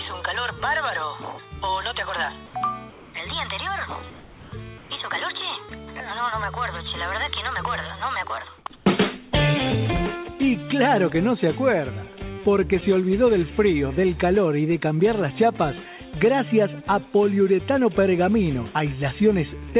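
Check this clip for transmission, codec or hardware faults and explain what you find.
The background drops out in short gaps at 2.46 to 2.54, 2.90 to 3.14, 4.10 to 4.52, 4.78 to 4.90, 8.58 to 8.66 and 8.76 to 8.86 s. Comfort noise in place of the background is the likely cause. Between sounds, transmission paused, and the receiver filled in steady, featureless synthetic noise. Most of these patches sit up to about 6 dB quieter than the real background, while the one at 8.76 to 8.86 s is about 1 dB louder. The call path cuts everything above 4 kHz, which fits G.711 A-law.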